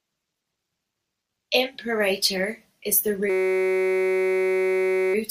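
Speech, with a system hang loop from 3.30 to 5.14 s, just after "is the" and before "of most". A 5.33 ms slice repeats hundreds of times, producing a steady 188 Hz buzz. This fits a 256-sample ring buffer replaying while the driver froze. Speech resumes without any apparent gap.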